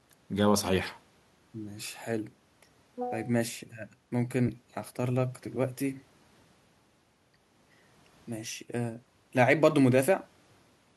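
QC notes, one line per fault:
No faults found in the speech clip. Nothing in the recording needs flagging for QC.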